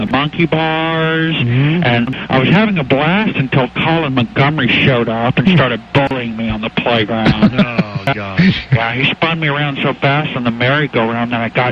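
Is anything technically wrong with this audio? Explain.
No, nothing technically wrong can be heard here.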